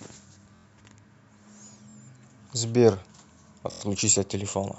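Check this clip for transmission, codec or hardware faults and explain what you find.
Three repeated buffer faults occur in the speech, at 0.56–0.65 s, 1.90–1.95 s and 3.72–3.81 s. Late-arriving audio made the device replay its last block of about 23 ms, fitting a 1024-sample buffer. You hear it as a short stutter. Unlike a dropout, it leaves no silence and loses no audio.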